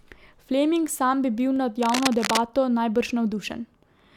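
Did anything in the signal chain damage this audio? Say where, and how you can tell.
Yes, two spots. At 1.56 s there's a single sharp click, a thin vertical line in the spectrogram. That's dropped samples: a tiny fraction of a millisecond went missing, so the waveform jumps. It's likely a driver or buffer hiccup losing a few samples.

From 1.81 to 2.41 s there's cable scratch noise, a burst of dense, uneven scratching sitting nearly as loud as the speech. That points to the analogue wiring, likely a worn cable or connector being moved so its contact resistance jitters.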